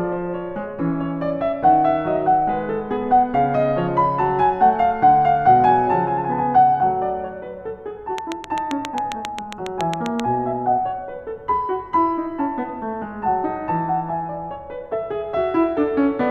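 A train of clicks runs from 8.18 to 10.21 s: around fifteen near-identical pulses at a regular 7.45 per second, ticking about 15 dB above the music, likely from electrical interference.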